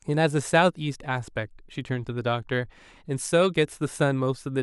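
No technical faults can be heard anywhere in the speech.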